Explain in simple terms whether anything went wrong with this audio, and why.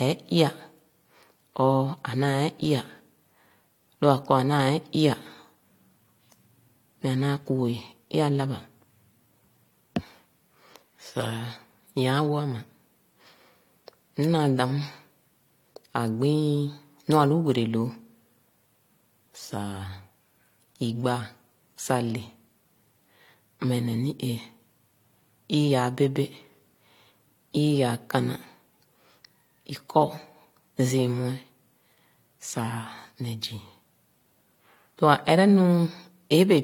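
Throughout the speech, two different kinds of compression smearing are heard layered together, with nothing above 19.4 kHz. That points to transcoding between lossy codecs: the audio was likely squeezed by one compressed format and then re-squeezed by another, each adding its own damage.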